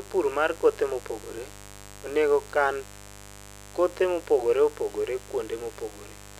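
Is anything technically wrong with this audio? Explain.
Yes. Mains buzz runs throughout the speech: switching spikes twice per 50 Hz cycle add harmonics into the kilohertz range, giving a steady, raspy buzz roughly 20 dB below the speech.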